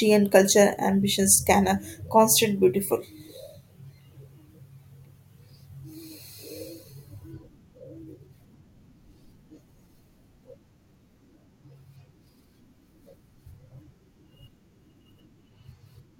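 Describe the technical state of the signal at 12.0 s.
Around 12.0 s the speech signal is intact, with no audible fault at that moment.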